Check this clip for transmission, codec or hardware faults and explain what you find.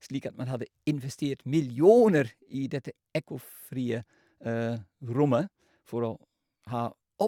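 No transmission, codec or hardware faults turn up in this clip.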